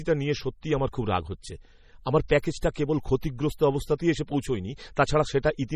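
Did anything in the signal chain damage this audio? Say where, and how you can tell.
Yes. MP3 compression runs through the whole speech clip, at the codec stage. The damage is heavy: a watery, swirling texture, with weak spectral detail flickering in and out between frames, and nothing above 16.9 kHz. This is likely a lossy encoder starved of bits. It zeroed the quieter frequency lines and band-limited the top end, which points to a very low bitrate, around 32 kbps.

Pre-echo occurs at 2.28 s and again at 2.74 s, also at the codec stage. Before each sharp onset there is a short hiss, smeared about 16 ms ahead of the first attack and 18 ms ahead of the second, so the attacks sound softened. The transform block spreads its quantisation noise evenly across its length. Noise sized for the loud attack therefore leaks into the near-silent moment just before it.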